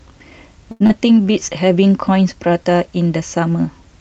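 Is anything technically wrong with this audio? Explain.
Yes, three timing faults in this speech recording, all early on, heard through a call codec whose audio stops at about 8 kHz.

Short stall from a late packet, 0.71 to 0.82 s. A packet arrived late and the jitter buffer emptied, so the receiver stretched the last sound for about 89 ms until the packet arrived, then resumed from the same point. Nothing is lost, but the sound there is held unnaturally long with a slight buzz or dip, and everything after sits about 89 ms later.

Short concealed packet loss, 0.86 to 0.91 s. About 60 ms of audio never reached the decoder in time, so the receiver invented roughly 32 ms to bridge the gap by extending the preceding sound, then blended back into real audio. The delay dropped by roughly 30 ms here, so part of the speech is simply missing. It comes across as a brief smear or wobble.

Jitter buffer slow-down, 1.22 to 1.40 s. 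To build up its reserve, the buffer repeated individual pitch periods and fragments of pauses over and over, adding about 43 ms. Over that span the speech plays at about 81% speed with unchanged pitch, so sounds are audibly drawn out.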